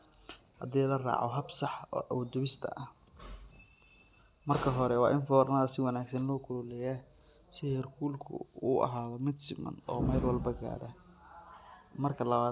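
No technical faults occur at any point in the audio, so there is nothing to describe in time order.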